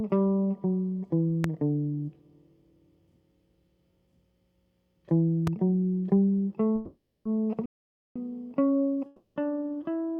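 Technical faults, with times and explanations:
1.44–1.47 s and 5.47–5.50 s, loud pop: a single sharp pop sits on top of the music each time, roughly 15 dB above it at first and about 10 dB the second time, with the music continuing underneath. A voltage spike from a plug, switch, static or driver glitch is the likely cause.
6.75–7.26 s and 9.06–9.37 s, call audio freeze: the music halts and the last sound is stretched into a fading buzz for 500 ms, then 300 ms, without dropping to silence. It resumes exactly where it stopped, so nothing is lost but everything afterward runs late. Delayed packets likely emptied the jitter buffer.
7.66–8.16 s, playback stall: the music stops mid-flow and the output is silent for about 0.5 s, then carries on. The player likely ran out of data or had its output thread blocked until it recovered.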